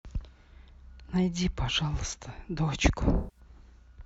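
From 3.16 to 3.40 s there's AAC frame loss with concealment: the decoder fills the gap from the last good spectrum, leaving the speech smeared and phasey.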